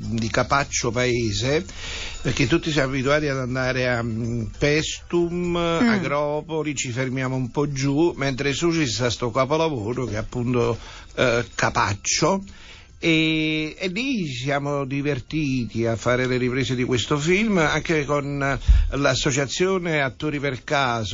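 From start to finish the audio carries plainly audible MP3 compression artefacts, likely from encoding at a low rate, which fits a bitrate around 32 kbps. Starved of bits, the encoder discards the upper band and drops quiet spectral detail unevenly, so the sound turns watery and swirling, with chirpy, metallic edges on bright sounds and softened onsets. A spectrogram would show a hard ceiling on high frequencies and flickering, patchy gaps in the quieter regions below it.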